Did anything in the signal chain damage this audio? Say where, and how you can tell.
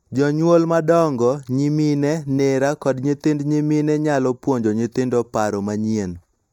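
Yes, there's channel delay (comb filtering) throughout: one side lags a fraction of a millisecond before the mono sum, notching around 3 kHz upward, so the speech sounds hollow.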